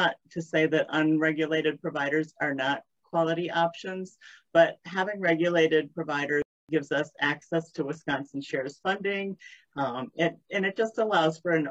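At 6.42 s the sound cuts out in mid-flow and stays silent until 6.69 s, a gap of about 0.27 s. This is a playback stall, most likely the player running short of buffered data or having its output thread blocked. On a waveform it shows as an abrupt flat line with no fade at either edge; a spectrogram shows a clean vertical band of empty bins across all frequencies.

From 7.26 s to the end, the quality drops suddenly with no gap, which marks adaptive stream at a lower bitrate. Swirly coding artefacts rise. That sound fits a switch from a full-band AAC-LC stream near 96 kbit/s to an HE-AAC stream around 20 kbit/s, where upper frequencies are regenerated rather than coded. A spectrogram shows the top band becoming smeared, patchy and copied-looking from 7.26 s on.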